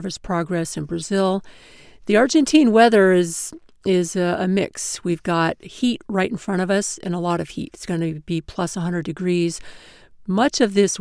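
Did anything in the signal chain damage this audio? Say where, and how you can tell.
No, no signal chain damage.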